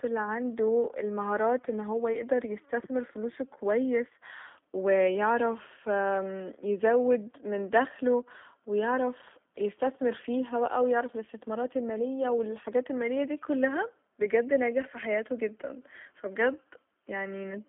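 G.729 codec damage runs through the whole speech clip. The signal has been rebuilt from a vocal tract filter, pitch predictor and a few pulses per 10 ms frame, as an 8 kbit/s coder does, so it sounds plainly rough and synthetic, confined to roughly 200 Hz to 3.5 kHz with nothing above 3.6 kHz.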